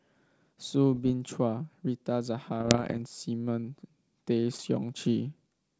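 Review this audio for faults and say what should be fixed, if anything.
Bits were flipped on the ADPCM link carrying this G.722 speech, at 0.92 to 1.11 s, 2.60 to 2.99 s and 4.54 to 4.61 s. The bit error rate was roughly 0.4 percent in the first burst and about 0.7 percent in the later two. Each corrupted code knocks the decoder's step size and predictor off track, so the error keeps ringing for some milliseconds. The result is pops and rough, gritty bursts with brief jumps in level. The middle burst is longest. Fix this by protecting the link: add error detection with concealment, or improve the radio or line quality so fewer bits are corrupted.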